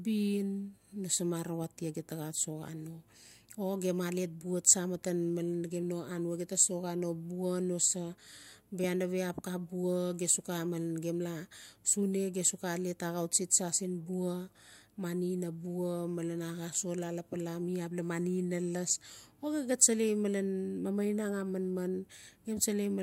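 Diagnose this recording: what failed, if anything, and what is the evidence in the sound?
Nothing here points to a failure at any stage, so there's no fault to diagnose in this speech recording.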